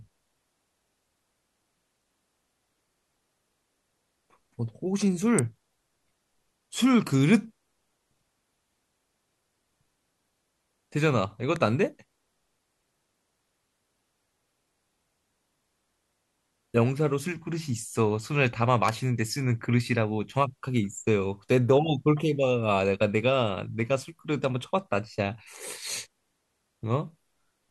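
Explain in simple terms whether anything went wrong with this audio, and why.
Three sharp snaps land on top of the speech at 5.39, 11.56 and 18.89 seconds, each lasting only a few thousandths of a second. This is an electrical switching spike, likely caused by a nearby switch or motor arcing and the audio line picking up the jolt.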